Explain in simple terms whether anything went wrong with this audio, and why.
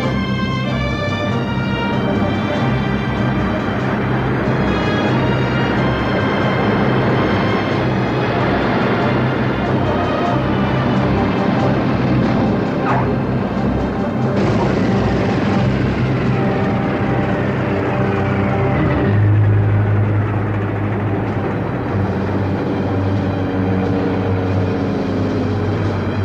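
Listening closely, nothing in the recording stood out as having gone wrong.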